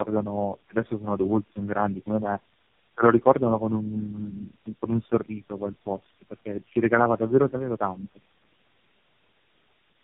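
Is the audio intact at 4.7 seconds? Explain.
No. Tandem speech coding runs throughout, 4.7 s included: the speech passed through four speech codecs in a row, the last likely AMR-NB, each re-coding the previous one's errors. The result is rough, muffled, warbly speech with nothing above 3.7 kHz.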